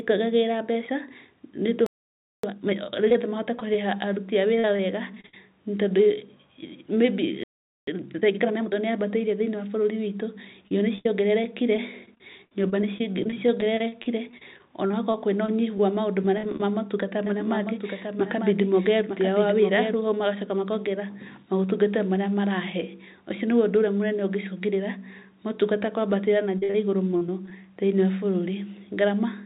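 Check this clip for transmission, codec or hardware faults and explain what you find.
Yes, there's a fair bit going on here: two stalls each followed by a hurried catch-up, three stretches of choppy robotic packet loss, and a stretch of doubled audio. All of it rides on a narrowband call path, so nothing comes through above 4 kHz, which fits a G.711 mu-law link.

The playback stalls come first, at 1.86 to 2.43 s (about 0.57 s) and again at 7.43 to 7.87 s (about 0.44 s). The speech just drops out mid-flow into silence, then picks back up. That's most likely the player running dry of data or having its thread blocked, so there was nothing to send to the output until it recovered.

Right after each stall there's a time-compressed catch-up: 2.43 to 2.99 s at 2x speed, then 7.87 to 8.73 s at 1.5x. The player is working off the backlog the stall built up by snipping out small chunks and cross-fading the joins. 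The pitch stays put, but the speech sounds rushed, and the first one is noticeably more frantic.

Repeated packet loss (robotic sound) shows up at 3.10 to 5.34 s, over a long stretch from 10.68 to 16.65 s, and at 26.58 to 27.52 s, just after "ũngĩcũngĩrĩra motungata kwambatĩra na". Packets keep going missing or arriving late. Each hole gets papered over by stretching the last bit of sound, and the next hole follows close behind. The result is choppy, robotic speech with short pieces missing. The gaps run up to about 54 to 67 ms, and the last stretch is the densest.

Finally, a doubled audio track runs from 17.26 to 19.94 s. A second full-band copy of the speech trails roughly a second behind the original at about 5 dB down. It has no reverb tail or room colour and switches in and out abruptly, so it's clearly a copy rather than an echo. The likely cause is the same audio being captured twice, with one path running slower than the other.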